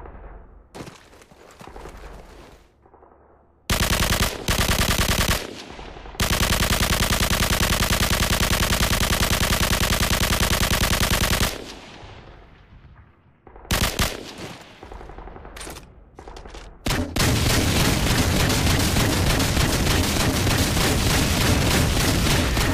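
No technical faults can be heard at any point in this recording. Nothing in the audio calls for a timestamp or a repair.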